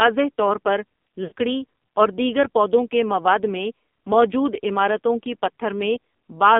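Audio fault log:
throughout: AMR narrowband mobile codec. The sound is confined to roughly 200 Hz to 3.6 kHz and carries heavy codec damage: a buzzy, synthetic texture. The codec rebuilds speech from a vocal-tract model excited by sparse pulses, and the degree of roughness points to a low mode near 5.9 kbps. A plain telephone band-limit would only dull the sound. Here the band-limit comes with that modelled buzz.
1.24 to 1.33 s: lost AMR speech frames. For about 80 ms, which fits four lost 20 ms frames, the decoder repeats its last good pitch and vocal-tract settings at falling gain. The sound stretches into a drawn-out warble and sinks toward silence before recovering briefly weak or rough. A simple dropout would cut to silence abruptly. This gap instead sustains the previous sound while it fades.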